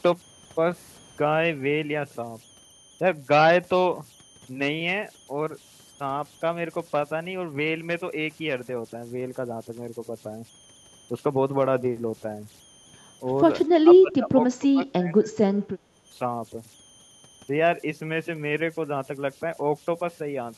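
A speech recording carries converter idle tones for its whole length. A tone sits near 3 kHz, and grainy noise runs under the quieter passages at about 29 dB below the signal. This is what a delta-sigma converter does when it runs without dither. With a small input it settles into repeating bit patterns. Those patterns form tones whose pitch follows the input's offset, so the whine stands out most in pauses. From 13.82 to 15.33 s the talker sinks sharply, by roughly 20 dB at the deepest point, for about one and a half seconds. This is likely speech suppressed in double talk. When both ends speak at once, the echo canceller cannot tell its own talker from the loudspeaker echo, so it turns both down together. Just after, from 15.61 to 15.96 s, the room sound itself drops by about 10 dB. It returns once that short stretch ends. That is background gated by the echo canceller. While the far end plays through the loudspeaker, the canceller clamps the microphone hard, and the ambient bed dips with it. 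It comes back when the canceller releases its hold.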